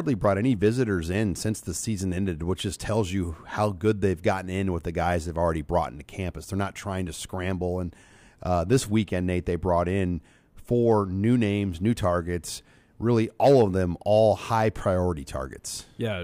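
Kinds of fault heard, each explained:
No kinds of fault heard.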